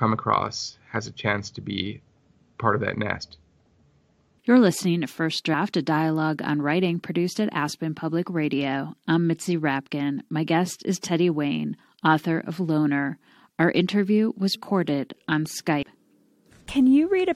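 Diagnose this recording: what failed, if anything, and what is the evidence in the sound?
Compressed frames were skipped at the codec decode stage. Whole 23.2 ms frames went missing or were rejected, so the speech jumps ahead by about 100 ms at 14.54 s and about 150 ms at 15.82 s.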